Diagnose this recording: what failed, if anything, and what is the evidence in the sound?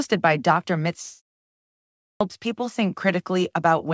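Two things went wrong here. First is a long network dropout from 1.02 to 1.73 s, so roughly 0.7 s of audio never shows up. You can hear the receiver's concealment stretch the last sound into a fading buzz. Then it gives up, and there's about 0.39 s of plain silence before the audio picks up again further on, with the lost chunk simply gone. The likely culprit is the network leg of the call path, the G.722 link that tops out at 8 kHz, losing a run of packets.

Second is a clipped start after a pause at 2.11 s. After nearly a second of quiet, the sound kicks in abruptly, with its first 95 ms or so swallowed, so the onset jumps straight out of silence without its opening. That points to the playback side: the output device or driver dozed off during the pause and needed that fraction of a second to wake and lock again before it let anything through.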